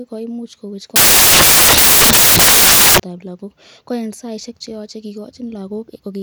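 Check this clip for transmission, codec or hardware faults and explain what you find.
One fault is present. From 0.96 to 3.00 s, samples built from the wrong bytes replace the speech with loud, harsh broadband noise. The reader misassembles each sample's bytes, so rapidly changing low bits dominate the values.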